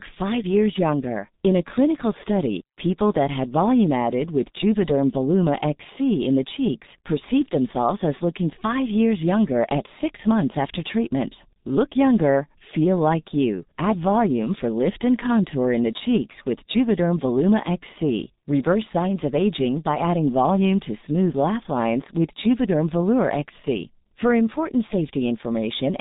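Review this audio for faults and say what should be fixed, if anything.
The whole recording has been through the G.723.1 codec, and it's heavy damage. Nothing gets through above about 3.8 kHz, so the speech comes out muffled, and the thin bitrate, which fits something around 6 kbit/s, leaves a hoarse, grainy edge on every voiced stretch. Because the codec models the voice in coarse 30 ms chunks and adapts slowly, consonants smear into their neighbours instead of landing crisply. To prevent it, record or route the call over a wideband codec such as Opus at a healthier bitrate, and keep G.723.1 out of the chain.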